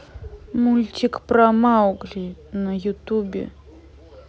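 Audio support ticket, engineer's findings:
No faults found in the speech audio; no symptom, time or probable component to report.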